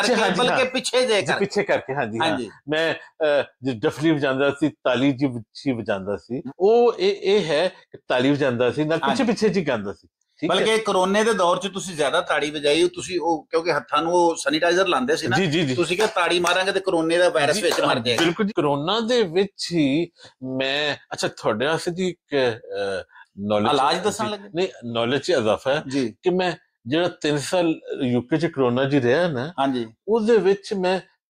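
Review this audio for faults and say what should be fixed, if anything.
Nothing in this audio needs to be fixed.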